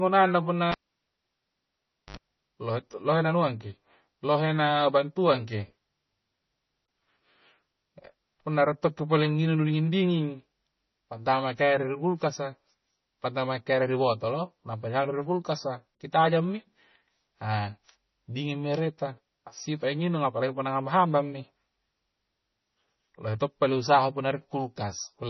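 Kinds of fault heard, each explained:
MP3 compression: likely a low-bitrate encode near 25 kbps starving the codec, so weak frequency lines drop in and out, making the speech watery, with nothing above 6 kHz.
Cable pulled and plugged in: a live cable comes out and goes back in, giving pops at 0.72 s and 2.17 s around 1.4 s of near silence, including a 67 ms burst of 50 Hz mains buzz, before "lohe tu lohe naungkangki'".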